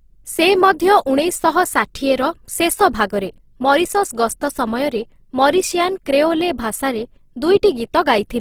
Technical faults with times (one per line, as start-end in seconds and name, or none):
0.00-8.40 Opus compression